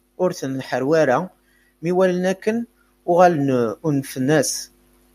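A speech recording with automatic gain rising running through most of it: from about 0.18 s to 4.55 s the level climbs steadily, ending up roughly 8 dB louder. The gain control has decided the input is too quiet and keeps nudging its gain up, so the voice and the room noise behind it swell together rather than the voice alone getting louder. That shared rise is the telltale sign it's the processing, not the talker.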